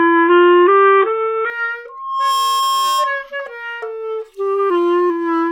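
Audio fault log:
0.0–1.5 s, input switched to a poorer device: likely a narrower-band input, so nothing passes above 3.8 kHz and the sound turns dull, with a small level shift and faint added noise.
1.89–3.30 s, loudspeaker feedback squeal: the microphone picks up its own loudspeaker, and a 1.1 kHz tone swells within about half a second until it is roughly as loud as the sound.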